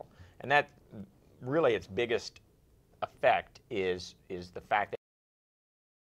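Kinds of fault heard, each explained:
Cut-off end: the sound just stops dead at about 4.95 s, mid-sound, with no natural decay or tail. What you're hearing is the last stretch of audio never getting written or played out, so the final buffers simply aren't there. From that point the clip sits in silence for roughly the last second, which makes the cut feel abrupt rather than like a fade or a pause.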